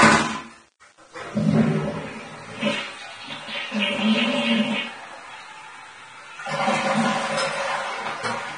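From start to finish, the sound carries a grainy, gritty distortion that moves with it. Quiet parts turn rough, and the faintest moments sputter. This is likely low bit depth without dither. Rounding to roughly 9 bits leaves error about 30 dB below the signal.

Throughout, nothing is heard above 9.7 kHz. The remaining treble sounds hissy and coarse. Tones are roughened and attacks blurred. This points to heavy Vorbis compression at a low bitrate, around 24 kbps. Fine detail was quantised into noise.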